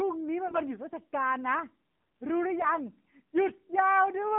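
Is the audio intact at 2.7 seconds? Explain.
No. Around 2.7 seconds the audio is damaged by AMR bit errors, a burst from 2.60 to 2.69 s that fits about four 20 ms frames. On a weak link, some of the less protected bits in each AMR frame arrive flipped, at a rate of a few percent, while the checksum on the core bits still passes. The decoder therefore places its excitation pulses wrongly and uses slightly wrong gain and spectral values. Pitch and level hold roughly steady, but the sound turns hoarse, scratchy and gargly. On a spectrogram, the harmonic striations in that span blur into ragged, noisy energy, though the band edge stays put. The waveform envelope stays about the same, but the periodic pulse shape becomes irregular.

Underneath, and at that moment too, the AMR narrowband mobile codec is plainly audible, which fits a 7.4 kbps mode. At 8 kHz sampling with a sparse-pulse vocal-tract model, nothing above 4 kHz survives, and this low rate makes the sound buzzy and synthetic. 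A spectrogram shows a hard ceiling at 4 kHz with an empty band above it. The waveform has a smoothed, pulse-driven look.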